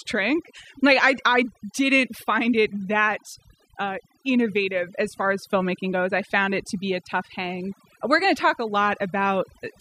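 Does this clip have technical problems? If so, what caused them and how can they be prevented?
Yes. Overdone noise removal throughout: an overly strong noise reducer suppresses frequency bands near its noise estimate, leaving twinkling specks in the background. Prevent this by setting noise reduction gently and checking quiet passages.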